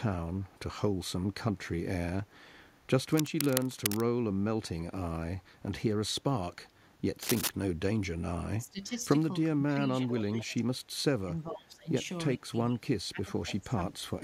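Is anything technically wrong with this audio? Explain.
Yes, this speech clip has three kinds of fault.

Echo leak: a faint, delayed copy of the speech trails behind it at 0.48 to 0.59 s and 2.26 to 2.68 s, about 40 dB down, and much more clearly from 10.06 to 10.55 s, only about 15 dB below the speech. The copy arrives about 419 ms late. This is likely the far end's loudspeaker sound reaching its microphone and slipping past an echo canceller that did not fully remove it.

Cable scratch noise: dense, ragged scratching covers the speech from 3.12 to 4.05 s and again from 7.23 to 7.50 s. It is loud, only about 5 dB below the signal. The rough, uneven bursts likely come from a worn cable, connector or control being moved, with its contact resistance jumping rapidly and injecting noise.

Speech suppressed in double talk: the speech sinks and breaks up at 8.63 to 9.02 s (dropping by up to about 15 dB), 9.51 to 10.9 s (up to about 25 dB), 11.25 to 11.88 s (up to about 20 dB) and 12.36 to 14.12 s (up to about 25 dB). 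The likely cause is both sides talking at once. The echo canceller could not tell the local talker from the loudspeaker echo, so it turned everything down.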